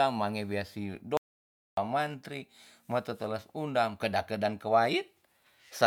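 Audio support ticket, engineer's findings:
Audio dropout to silence, 1.17–1.77 s: speech cuts mid-flow after "mange wia si", resumes at "mantri ma teteles undam". About 0.6 s of silence, no room tone. Likely input loss (device disconnect, link failure or mute) while recording continued writing silence. Content in gap unrecoverable.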